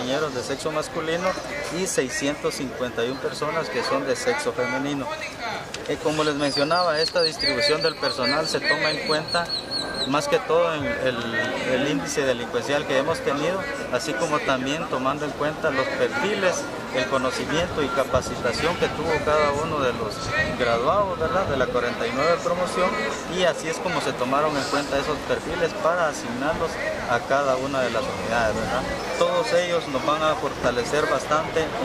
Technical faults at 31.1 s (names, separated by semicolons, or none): overlap between stream segments